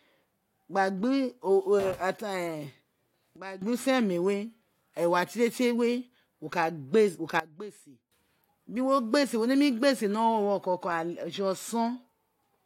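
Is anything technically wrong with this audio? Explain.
Yes. There are two sudden gain jumps. The level drops by about 15 dB from 3.36 to 3.62 s, and by about 17 dB from 7.40 to 8.12 s, just before "biri wo gba se". Speech and background noise fall and recover together, likely from gain changes applied without a ramp. The waveform's envelope steps down and up abruptly, and the spectrogram darkens uniformly across all frequencies.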